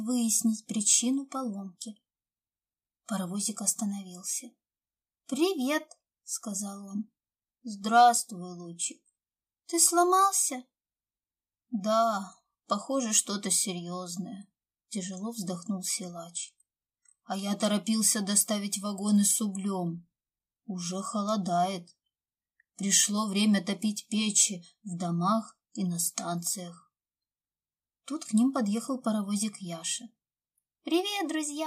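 No technical faults can be heard anywhere in this recording.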